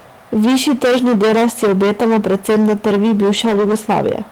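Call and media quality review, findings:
Hard clipping throughout. Every loud sound is a harsh fuzz. Overdriven about 17 dB, with roughly a third of samples cut flat at a gain or converter stage.

Lost packets rebuilt from error correction, 3.33 to 3.71 s. No gap, but 200 ms sounds rougher and noisier. Likely Opus in-band FEC copies replacing several separately lost packets.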